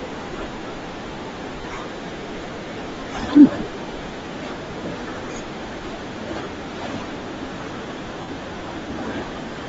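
Throughout, the speech has a breathy, grainy top end with noise-filled highs, likely Bluetooth LC3 compression at a low bitrate around 32 kbps. Lost LE Audio frames at 1.61 s (30 ms), 4.71 s and 6.44 s (20 ms each), and 8.21 to 8.28 s were concealed by repeating the previous spectrum, producing brief noisy smears.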